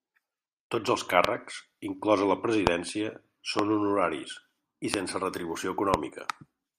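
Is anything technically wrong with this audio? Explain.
Yes. Five loud pops sit on top of the speech, at 1.25, 2.67, 3.59, 4.94 and 5.94 s. Each is a single sharp click about 20 ms long, jumping roughly 20 to 25 dB above the speech. They likely come from voltage spikes, such as static discharges or a driver glitch, added to the signal and shaped into brief pulses by the circuitry downstream. Unlike a dropout, nothing is lost: the speech carries on unbroken beneath each pop.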